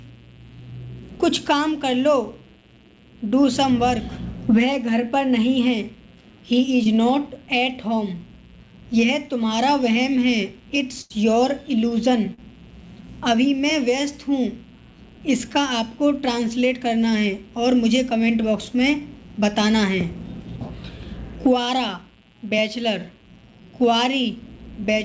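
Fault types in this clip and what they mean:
Mains buzz: interference from the 60 Hz supply leaks into the signal chain, leaving a steady raspy buzz at about 35 dB below the sound throughout.
Short concealed packet loss: brief chunks of audio arrived too late, and the receiver patched them by extending the previous sound, causing short smears near 6.84 s and 12.34 s.
Burst of packet loss: around 80 ms went missing in a row at 11.01 s, so the last sound is held and fades before playback jumps ahead past the gap.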